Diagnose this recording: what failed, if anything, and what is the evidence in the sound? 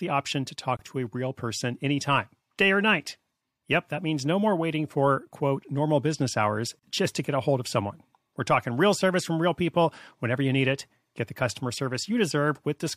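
The failure is at the codec stage: a gap at a join of encoded pieces, twice, 6.0 s apart. A 24 ms silence opens at 0.77 s, after "option to" and before "to a real person", and a 37 ms silence at 6.79 s, after "quote normal business hours" and before "just to get a". The speech breaks abruptly, with smeared edges, then resumes where it stopped. This fits 6-second segments encoded separately and concatenated untrimmed, keeping encoder start delay and last-frame padding.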